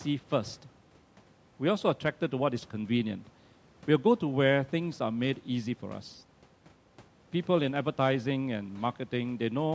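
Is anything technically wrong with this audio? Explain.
No, nothing in this speech recording points to a technical fault. It has the limited top end of call microphone processing, with nothing above 8 kHz, and a faint room noise sitting about 31 dB below the speech.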